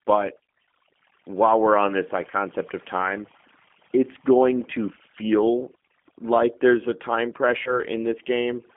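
Overdone noise removal runs through the whole speech recording. The suppressor was pushed so hard that individual frequency bands near its noise estimate are cut almost to nothing, taking the softer parts of the speech with them. Between phrases the background falls to near silence with scattered twinkling specks. Unlike a plain noise gate, which closes the whole signal at once, this works band by band, so the artefacts are tonal chirps rather than abrupt on-off cuts.

Also throughout, the G.729 codec shapes the sound. Its damage is plainly audible, and the roughness and slightly synthetic texture fit an 8 kbit/s G.729A coder, which rebuilds each frame from a vocal tract filter, a pitch predictor and a few pulses. The line band runs from 150 Hz to 3.4 kHz, so there is no low bass and nothing above telephone range. This is a model-based roughness that stays locked to the speech. That sets it apart from the background warble of the noise removal.

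From 7.64 to 7.79 s, just after "like there's a time", comes VoIP packet loss concealed by the speech codec. The gap fits about 20 ms of missing audio, two frames. The decoder filled it by extending its last pitch and filter with falling gain, so the sound stretches briefly and fades. Because each frame builds on the one before, the speech stays weak and distorted until about 7.79 s. A hard dropout would instead cut straight to silence.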